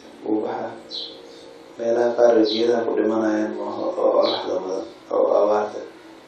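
No technical faults occur anywhere in the recording, so there is nothing to place in time order.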